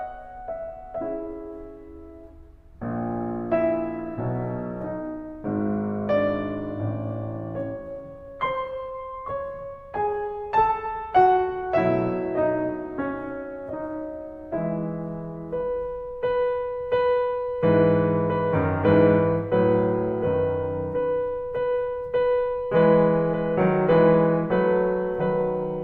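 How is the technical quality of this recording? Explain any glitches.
Nothing in this music recording stands out as a technical glitch, so there's nothing here that needs explaining.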